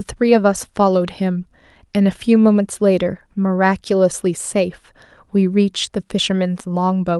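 Speech recording with no audible technical faults anywhere.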